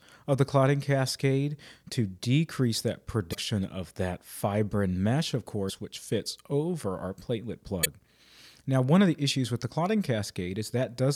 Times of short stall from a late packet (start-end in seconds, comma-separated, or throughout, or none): none